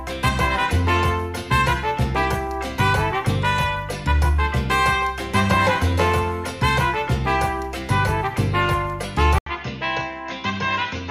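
At 9.38 s the sound drops out for 80 ms, then returns duller, somewhat quieter, and over a new noise floor well below the signal, until the end. This likely means the input switched to a poorer device. On a spectrogram, energy stops sharply at 6.8 kHz after the brief blank gap, and the waveform shrinks.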